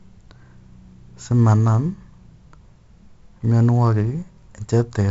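Throughout the speech, 4-bit ADPCM compression leaves a gritty hiss that rises and falls with loudness and smears consonant attacks, with nothing above 7.7 kHz, which fits a 16 kHz sample rate. Unlike a perceptual codec, it doesn't warble or swirl.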